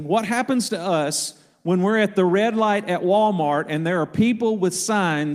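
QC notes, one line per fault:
No faults detected in the speech audio.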